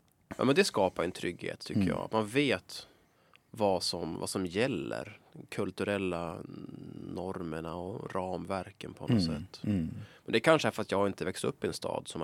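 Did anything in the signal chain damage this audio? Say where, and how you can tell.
No, nothing in the chain damaged it.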